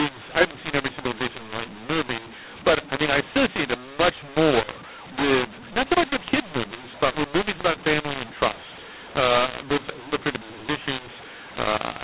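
Mu-law and A-law mixed up, running from start to finish: the speech was encoded with G.711 A-law but decoded as mu-law, so each 8-bit code maps onto the wrong logarithmic curve. Sample levels come out scrambled, some too loud, others too soft, and the quietest values jump well above silence. The result is harsh, gritty distortion on every syllable, with noise filling the pauses, all within the telephone band that stops at 4 kHz.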